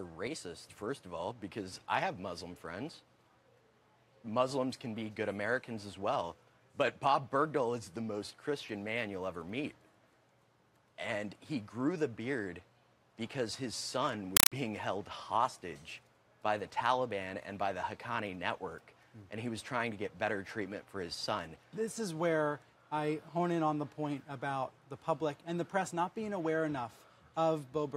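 From 14.37 to 14.52 s the audio gives way to a compressed stream played as audio: 4 ms noise bursts with quiet gaps, repeating 31.25 times a second. That regular chatter, unlike random crackle, points to an undecoded AC-3 stream, about 192 kbps.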